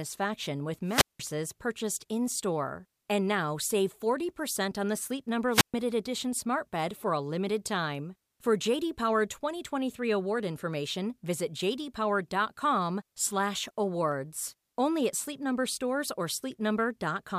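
At 0.85 s the speech thins into a brief swell of hiss and static, then drops into a hole of near silence lasting about 184 ms before returning at 1.20 s. The same wireless microphone squelch dropout recurs from 5.51 to 5.74 s, muting for about 129 ms and coming back on "edition smart bed for". The radio link faded until the receiver's squelch shut the output. That rising noise ahead of the mute separates it from a digital packet-loss gap, which cuts cleanly with no static.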